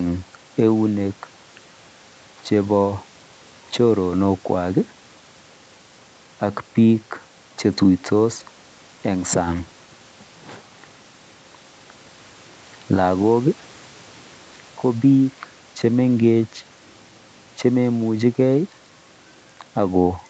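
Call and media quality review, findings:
Nothing stood out on listening to this speech recording over the call path; the band limit near 8 kHz and the faint room noise well below the speech level are what that path normally sounds like.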